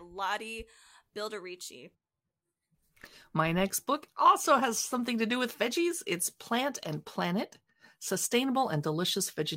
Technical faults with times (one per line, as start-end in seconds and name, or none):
none